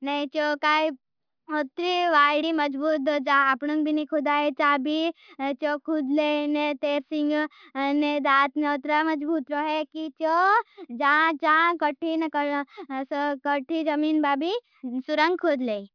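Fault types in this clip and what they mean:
Nothing to list here, since no technical faults turn up anywhere in this speech recording.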